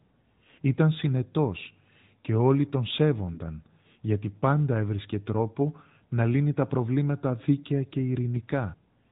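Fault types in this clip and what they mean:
AMR narrowband mobile codec: Throughout the clip, the speech passes through a 2G/3G-style mobile codec sampled at 8 kHz. Nothing above 4 kHz survives, and the plainly buzzy, synthetic quality of the vocal-tract model points to a mid-rate mode of about 10.2 kbps.
Lost AMR speech frames: At 1.64 to 1.68 s and 3.34 to 3.40 s, the speech briefly dips and warbles. Each event sounds like a single 20 ms frame failing its checksum, with the decoder repeating the previous pitch and vocal-tract settings at reduced gain.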